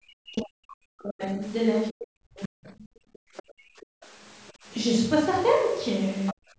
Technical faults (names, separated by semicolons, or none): speech suppressed in double talk; other side's voice leaking through; background gated by the echo canceller